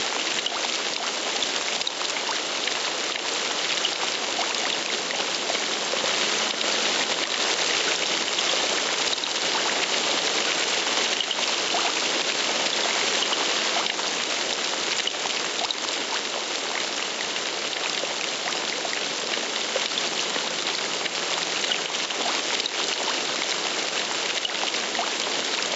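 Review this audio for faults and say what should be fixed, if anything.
There's gain pumping all the way through. The level keeps moving by roughly 5 dB. That squeezes loud and soft parts together and leaves everything sounding squashed. The likely cause is input gain set far too hot, so a fast limiter or compressor is clamping down on every peak. To prevent it, back off the input gain so the limiter isn't constantly grabbing.

From 6.04 to 13.8 s you've got a doubled audio track. A second full-band copy sits roughly 100 ms behind the original and about 5 dB quieter. It has no decay or room colour to it, so it reads as a hard slapback rather than an echo, and it cuts in and out abruptly at those two points. The likely cause is the same signal being captured again through a slower path, or an edit holding two misaligned copies. To prevent it, make sure only one capture route feeds the mix and check edits for stacked duplicates. 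The top end stopping at 8 kHz just reflects the call path's bandwidth.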